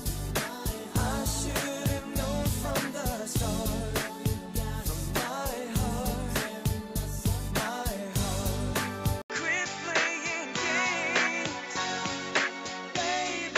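At 9.22 s the sound drops out for about 80 ms. When it returns, everything above 7.6 kHz is gone, so the top end turns dull and boxy. A new background noise sits roughly 30 dB below the signal. The loudness stays about the same. This lasts to the end. The pattern points to an input switched to a poorer device, likely a different microphone or a headset call profile taking over mid-recording.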